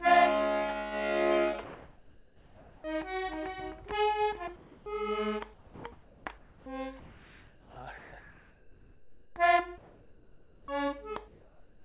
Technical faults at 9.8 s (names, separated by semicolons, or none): comfort noise in place of the background